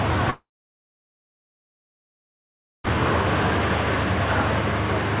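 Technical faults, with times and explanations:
0.3 to 2.86 s, long network dropout: the sound breaks into a brief fading buzz and then about 2.4 s of near silence before resuming at 2.86 s, with roughly 2.5 s of material simply gone. This is likely a stall in the packet stream. The receiver smeared the last received audio into a decaying buzz to hide the gap, then gave up and held silence until packets arrived again. The narrow, telephone-like band, with nothing above 4 kHz, fits a G.711 call path.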